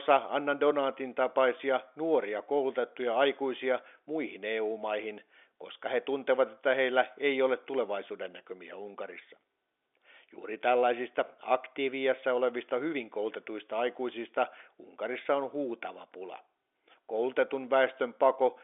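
No faults are audible: the speech sits in the ordinary telephone band of 300 Hz to 3.6 kHz, with nothing above 3.8 kHz, as expected of G.711 telephone coding, and any coding noise is faint at most.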